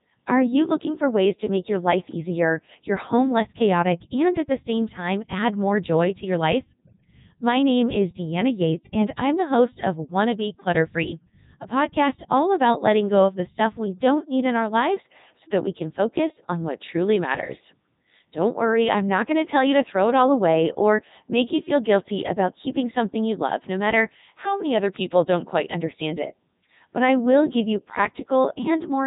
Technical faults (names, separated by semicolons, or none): Codec 2 vocoder; DC step